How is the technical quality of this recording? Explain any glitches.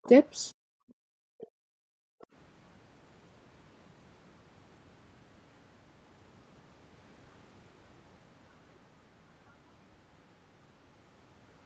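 The recording has two echo-related problems in its first couple of seconds, heard over speech band-limited to about 8 kHz by the call path.

Other side's voice leaking through: faint scraps of a second voice at 0.04–0.09 s, 1.41–1.46 s and 2.21–2.26 s, roughly 30 to 40 dB under the speech, likely residual loudspeaker echo the canceller missed.

Background gated by the echo canceller: from 0.54 to 2.28 s the room sound dips, by up to about 40 dB and for roughly one and a half seconds in total, as the canceller clamps the microphone.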